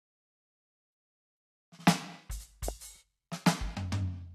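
At 2.68 to 2.71 s there's a loud pop: one sharp, single hit that jumps roughly 15 dB above the music, with the music carrying straight on underneath it. That kind of spike is likely a voltage step getting into the signal, say from a switch, a bit of static or a driver hiccup, and the circuitry after it smears the step into a short thump rather than a clean tick.

Right after, at 2.96 s, you get a repeated buffer. The playback ran dry for a moment, so it replayed the last chunk of audio it had instead of waiting. Each chunk is about 5.33 ms, which fits a 256-sample buffer, and it plays a couple of extra times with a hard seam at each join. Around 10 ms of real music gets skipped, and because the chunk is so short it comes across as a brief buzzy click rather than an obvious stutter.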